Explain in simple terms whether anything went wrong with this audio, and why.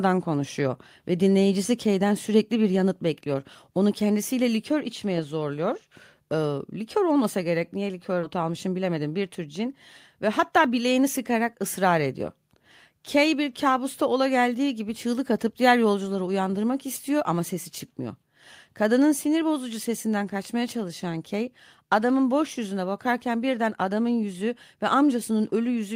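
Skip ahead at 8.23–8.25 s, right after "olmasa gerek niye": about 0.4 s of speech was dropped while later audio waited, so playback jumps forward.

Jitter buffer speed-up from 8.35 to 9.67 s and from 10.21 to 11.04 s, ending before "sıkarak ısrar ediyor": the receiver trimmed tiny slices to clear backed-up audio, making speech run about 8% faster at the same pitch.

Microphone volume stepped down at 19.12 s, just before "sinir bozucu sesinden kaçmaya": the level drops slightly in one step, likely because the call software turned down the microphone's input.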